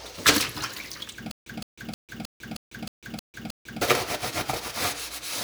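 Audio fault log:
1.31–3.82 s, stutter with silent gaps: the stream likely stalled and, at each retry, replayed the last fragment before running empty. A 165 ms burst repeats eight times, once every 313 ms, with 148 ms of digital silence between, so the sound due there is lost.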